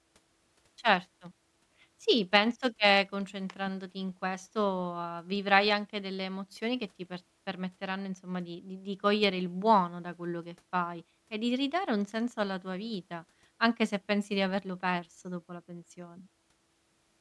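Speech recording with no audible technical faults.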